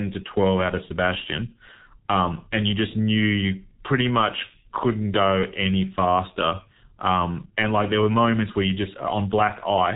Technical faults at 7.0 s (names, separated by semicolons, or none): G.723.1 codec